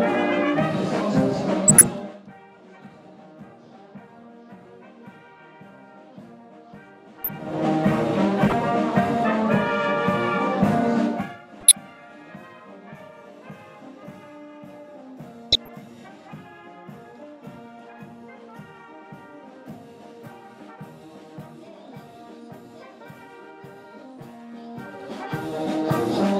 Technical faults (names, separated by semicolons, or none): corrupt frame decoded